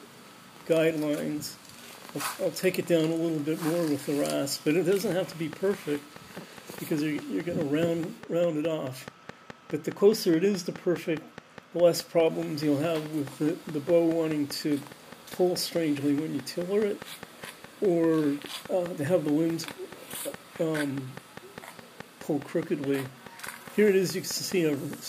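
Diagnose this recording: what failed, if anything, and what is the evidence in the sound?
A train of clicks runs from 5.12 s to 24.94 s, a regular ticking at 4.8 per second, about a hundred in all, peaking about 5 dB above the sound. On a spectrogram they're evenly spaced thin broadband vertical lines; the waveform shows near-identical spikes. Likely analogue-wiring interference from nearby equipment.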